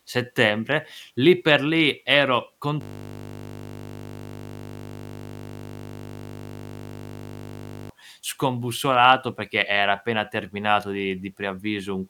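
From 2.81 to 7.90 s, a system hang loop repeats one 20 ms slice of speech, producing a steady 50 Hz buzz while the stalled driver's ring buffer cycles.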